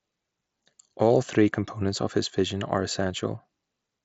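A speech clip with nothing technically wrong with it.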